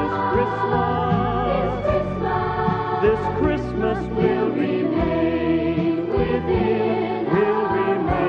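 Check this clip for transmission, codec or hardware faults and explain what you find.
No transmission, codec or hardware faults.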